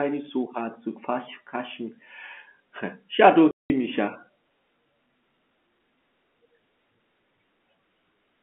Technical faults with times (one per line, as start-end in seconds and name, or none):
3.51-3.70 packet loss filled with silence